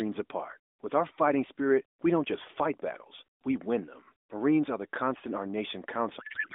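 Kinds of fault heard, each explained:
Codec payload misread: From 6.20 s to the end at 6.55 s, the AMR frames are decoded with the wrong bit packing, so the speech gives way to garbled noise and warble that barely tracks it. Unlike packet loss, there is no gap or concealment, only wrong sound.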